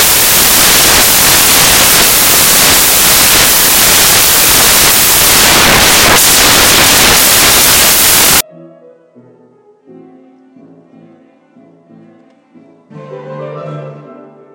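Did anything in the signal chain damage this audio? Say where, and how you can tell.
Yes. From 0 to 8.41 s, samples built from the wrong bytes turn the sound into loud, harsh broadband noise. Sample-format conversion misassembles each sample, promoting noisy low bits.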